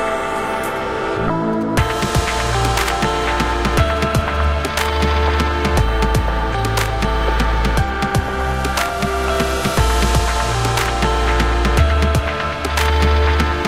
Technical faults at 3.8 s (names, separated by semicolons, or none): GSM signalling bursts